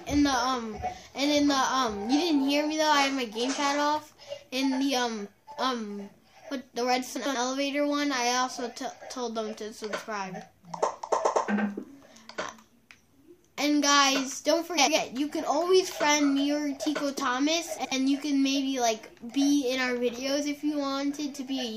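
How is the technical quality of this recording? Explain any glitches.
The recording has three brief glitches, all of one kind: frames out of order, at 7.16–7.35 s, 14.77–14.97 s and 17.77–17.92 s. Neighbouring blocks of about 93 ms (70 ms in the last) play swapped. Each sounds like a garbled flutter. No time is lost.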